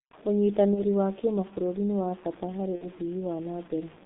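Speech runs through a narrow, heavily coded telephone path, with grit on top. The G.723.1 codec damage is heavy throughout. The sound is muffled and hoarse, and the consonants are smeared. Only about 150 Hz to 3.7 kHz gets through, which fits the roughly 6.3 kbit/s rate of this 30 ms-frame telephony coder. A spectrogram shows a hard ceiling near 3.7 kHz with blank space above it, an empty strip under 150 Hz, and coarse, blocky harmonics that change in steps rather than smoothly. Over the whole clip there is also a grainy, rasping distortion that tracks the level of the speech. It is harshest on quiet syllables and tails, which sputter or collapse to silence. The likely cause is low bit depth without dither: the samples seem to have been truncated to something like 6 bits, leaving error only about 25 dB below the signal. Zoomed in, the waveform looks like a visible staircase. The spectrogram shows a signal-dependent noise haze that comes and goes with the speech instead of sitting at a steady floor. 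Twice the speech turns into a fading buzzy smear as VoIP packet loss is concealed by the speech codec. The decoder repeats its last pitch and filter at falling gain, then takes time to recover. This happens from 0.74 to 0.82 s, consistent with one lost 30 ms frame, and from 2.76 to 2.87 s, fitting two frames (60 ms). Each spot shows as a short stretch of repeated, evenly spaced harmonics that dim gradually, with weak energy just afterwards.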